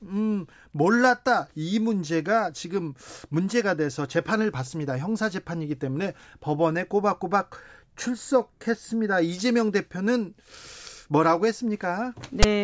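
Right at the tail, around 12.43 s, there's a tiny but nasty blip: file tags played as audio. A block of text metadata got handed to the decoder as if it were sample data, so those character bytes come out as a loud, rasping burst that sits lopsided rather than centred, because text byte values don't average out around zero. It lasts only about 14 ms, with hard edges, so it reads as a sharp crack of static.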